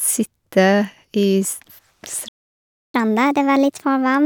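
A speech recording with two linked playback faults. At 2.28 s the sound cuts out completely. This playback stall lasts about 0.66 s, until 2.94 s. The player most likely ran out of buffered data, or its thread was blocked, and output went silent. The speech then resumes. From 2.94 s to the end, the player plays catch-up at higher speed. It resamples its backlog at 1.25 times normal speed to win back the lost time. Because resampling changes pitch along with speed, the speech sounds faster and about four semitones higher.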